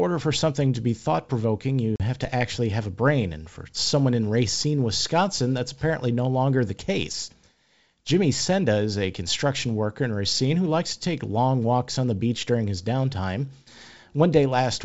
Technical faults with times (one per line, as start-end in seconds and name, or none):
1.96-2.02 packet loss on an ADPCM call